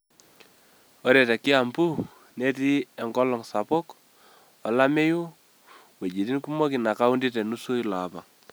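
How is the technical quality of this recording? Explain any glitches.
No glitches or faults detected.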